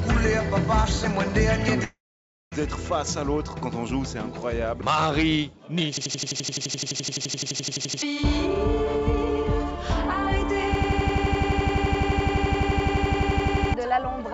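From 1.84 to 2.54 s the sound decays into a fading buzz, then near-silence for about half a second before resuming with a gap. This is likely a long network dropout, with the receiver concealing roughly 0.7 s of missing audio.

From 5.97 to 8.02 s an 85 ms fragment repeats as a rapid stutter at 11.7 Hz, in a system hang loop. The frozen system kept replaying a buffer that fits 4096 samples, and about 2 s of audio was lost.

The same system hang loop returns from 10.75 to 13.74 s, with the identical 85 ms stutter at 11.7 Hz. About 3 s of audio is lost there. Throughout the clip, the call path's band stops at 8 kHz.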